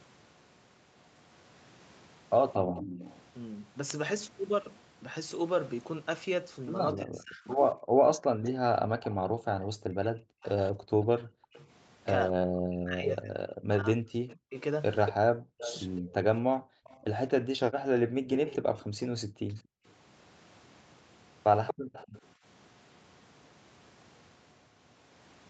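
An echo leak first appears at 2.53 to 3.21 s: the far end's echo canceller likely failed to remove its loudspeaker's sound from its microphone, so a copy of the speech returns 232 ms late, about 15 dB below the direct voice. It recurs at 6.94 to 8.49 s at the same level, then at 15.06 to 19.61 s at about 10 dB down, and at 21.67 to 22.21 s at about 5 dB down. From the third occurrence on, the repeat grows more prominent.

From 6.94 to 16.5 s there is speech suppressed in double talk. With both sides talking, the echo canceller likely could not tell the local talker from the loudspeaker echo, so it turned both down. Over roughly 7 s of that stretch the voice sags, loses brightness or breaks into pieces, with the deepest drops reaching about 40 dB.

Background gated by the echo canceller shows up three times. While the loudspeaker played, the canceller clamped the microphone hard, so the room sound drops out and then comes back. 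There is a brief dip of about 26 dB at 7.77 to 7.83 s. Across 16.01 to 19.85 s, about 1.5 s of gaps reach about 40 dB. A 40 dB hole appears at 21.74 to 21.93 s.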